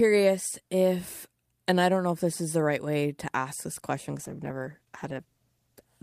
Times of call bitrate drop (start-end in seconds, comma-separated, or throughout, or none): 4.12-5.93